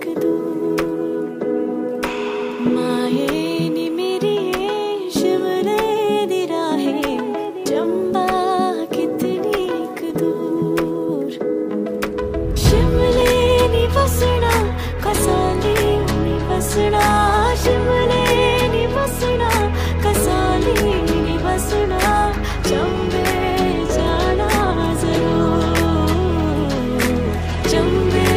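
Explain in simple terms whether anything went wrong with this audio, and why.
Three small jumps in the sound, at 10.10, 13.22 and 20.79 seconds, are likely dropped buffers (overrun): a few milliseconds of audio were lost and the edges joined directly.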